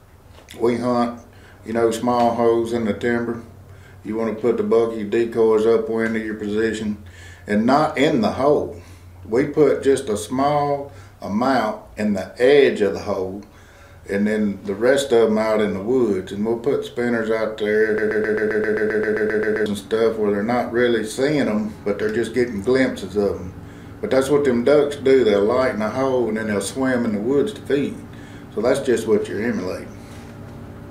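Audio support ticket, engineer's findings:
Broken-record loop, 17.98 to 19.66 s. A 0.13 s fragment repeats back to back 13 times, stuttering in place, then the audio jumps ahead. Likely a player, encoder or stream stall that kept re-sending its last held fragment. Whatever should have played in those 1.7 s is gone, not just delayed. Worth checking buffer underrun handling on that path first.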